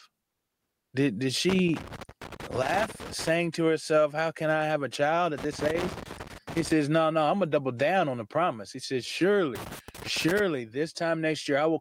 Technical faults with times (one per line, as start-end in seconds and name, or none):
0.21-0.93 comfort noise in place of the background
1.49-3.29 loose connector crackle
5.38-6.72 loose connector crackle
9.55-10.40 loose connector crackle